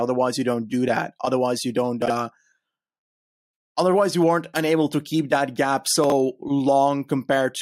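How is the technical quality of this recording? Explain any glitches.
There are two short glitches in the speech, both the same kind of fault: chunks out of order, at 2.02 to 2.10 s and again at 6.04 to 6.12 s. In each 80 ms stretch, one small block of audio turns up late and plays after material that should have come after it. What you hear is a quick scrambled blip. The timing fits a 20 ms chunk landing about three places too late. Nothing is missing, just shuffled.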